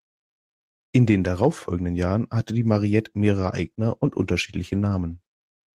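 From 3.44 s until the end, the speech turns rougher and watery, with the top end sounding duller than before. This is a call bitrate drop: the connection's bandwidth estimate fell, so the encoder was pushed from 32 kbps down to 18 kbps and stayed at its lowest for about 1.6 s. With fewer bits, each frame is coded more coarsely and the high frequencies are trimmed, and the bitrate does not recover before the clip ends.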